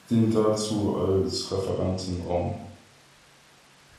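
From 1.46 s, right after "dient dazu", and on to the end, the treble dulls and a gritty noise rises under the speech. This is a Bluetooth SBC bit pool drop: the link likely congested, starving the top sub-bands and quantising the rest coarsely, consistent with a fall from bit pool 28 to 12, around 96 kbps.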